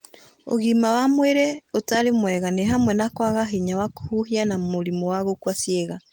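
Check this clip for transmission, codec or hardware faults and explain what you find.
No transmission, codec or hardware faults can be heard in this speech clip. The Opus voice compression is audible only as light coding damage, with the band kept full and content reaching up to about 20 kHz, which fits a hybrid mode at around 24 kbps.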